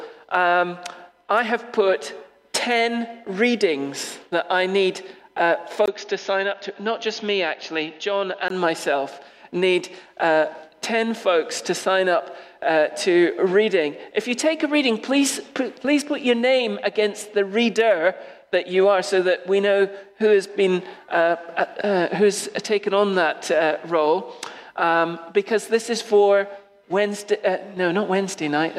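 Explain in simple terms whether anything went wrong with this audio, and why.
From 5.86 to 8.50 s the input likely switched to a poorer device, so the sound briefly drops out, turns dull and quieter, then recovers.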